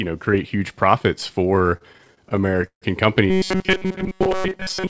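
Speech carried over a G.722 call path, with nothing above 8 kHz. From 1.56 to 2.84 s, right after "know create huge profits", repeated stalls (stutter) make the audio drag through 17 brief held-over gaps, the longest 150 ms, with nothing actually lost. Unlike dropouts, it stretches rather than cuts. From 3.30 s to the end a rigid metallic buzz at 188 Hz sets in, with roughly 70% of the sound repeated. The likely cause is robotic sound from repeated short buffers of about 5 ms, heard as a steady pitch rather than pauses.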